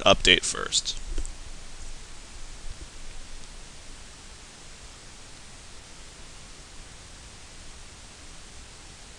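Nothing technical stands out in this audio; it runs along without any glitch or problem worth pointing to.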